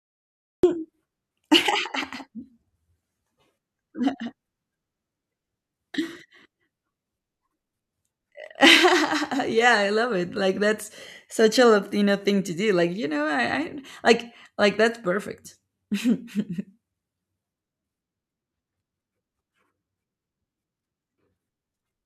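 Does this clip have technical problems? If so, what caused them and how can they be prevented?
Yes, there's a cut-off start: digital silence until 0.63 s, then the speech jumps in mid-sound because capture began late. Start recording a beat before anyone talks.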